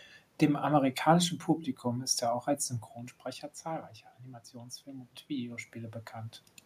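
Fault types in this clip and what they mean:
Automatic gain rising: The input fell by about 13 dB, so the gain control slowly raised its gain, by about 4 dB. From 4.51 to 6.43 s, the voice and the room noise swell together. The rise is gradual, not a sudden jump.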